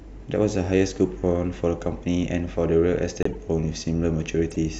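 Corrupt frame decoded at 3.23–3.35 s and again at 4.51–4.56 s: bit errors inside compressed frames were played through, misplacing energy across frequencies for the span of a few damaged frames. The first is a loud artifact with its error peaking around -10 dBFS; the second is much fainter, around -30 dBFS.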